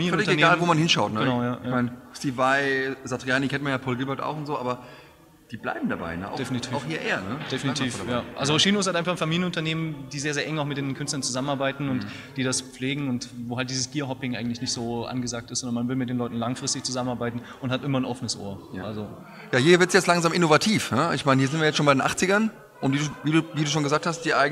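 A brief noisy smear at about 23.12 s briefly replaces the sound with a hissy wash before it returns. These are lost LE Audio frames: the LC3 decoder filled the gap by reusing the last spectrum with randomised signs, and the short gap fits a single missing 10 ms frame.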